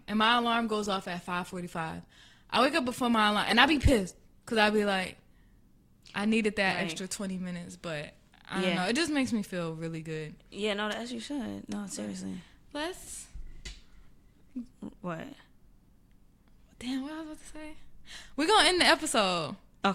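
For the first 6.0 s the speech sounds thin and smeary, with the top end dull and a bit synthetic. That's an adaptive stream starting at a low bitrate, which fits a low-rate Opus version of about 16 kbit/s. At 6.0 s it jumps cleanly to a fuller, brighter encode, something like 64 kbit/s, without any gap.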